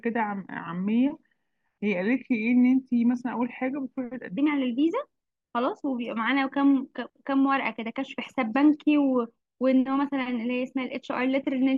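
From the start to 4.38 s there's a section at the wrong speed, running at 0.844x, so the speech drags and sits roughly three semitones low, likely from a clock mismatch.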